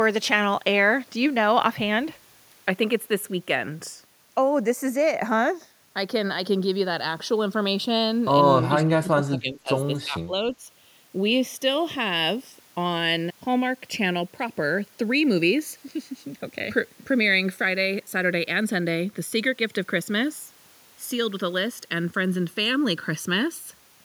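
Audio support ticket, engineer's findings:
Channels drifting apart, whole clip. Slow flanging on the mono sum. Separate device clocks, around 30 ppm apart, so the inter-channel delay creeps up to under a millisecond by the end. Spectrogram: comb notches gliding steadily downward, the lowest nearing roughly 700 Hz late on.

Speech suppressed in double talk, 8.72–9.70 s. Level pumps down, deepest about 20 dB, with around 0.7 s of audio affected in pieces. Likely the echo canceller mistaking near-end talk during far-end playback for echo. Waveform: envelope notches; spectrogram: upper band thinning and gaps.

Speech suppressed in double talk, 9.99–10.62 s. Likely same mechanism, shallower, about 15 dB at worst, roughly 0.3 s affected. Waveform shows brief amplitude dips; spectrogram shows short high-frequency dropouts.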